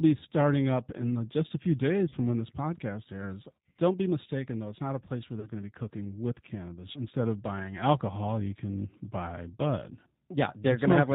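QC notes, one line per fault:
throughout: G.729 codec. Band-limited speech with nothing above 4 kHz, and a rough, slightly synthetic texture that is plainly audible. The decoder rebuilds the sound from a vocal-tract filter, a pitch predictor and a few pulses per frame, which fits an 8 kbit/s G.729A link.
2.09–2.15 s, 3.72–3.76 s, 5.40–5.49 s: VoIP packet loss concealed by the speech codec. Each event is a short stretched sound, a buzzy tone or coloured noise, that decays, after "the just a few", after "when this podcast airs" and after "not a place where". Each points to a single lost packet, about 30 ms, which the decoder filled by extrapolating its last pitch and filter at falling gain. Because each frame builds on the previous one, the sound stays weakened briefly afterwards, as at "when this podcast airs" and "going to be cooking".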